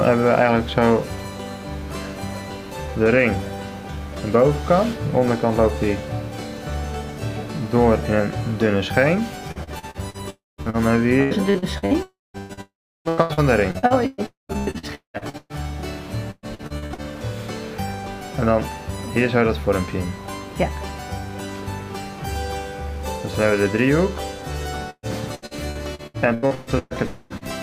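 Repeated packet loss hits from 9.51 to 15.64 s, 16.31 to 17.01 s and 24.9 to 27.44 s; patched holes up to about 0.19 s long make the sound choppy and robotic. Within these stretches, a likely long network dropout at 10.30, 12.03, 12.61, 14.26 and 27.06 s produces fading buzz, then silence in all but the last, each lasting 0.24 to 0.44 s.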